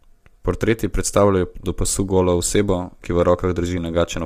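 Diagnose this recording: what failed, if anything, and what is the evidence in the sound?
Codec stage. Throughout, the speech sounds rough and grainy, with noise between harmonics. Likely low-delay AAC compression, fitting AAC-ELD near 32 kbps.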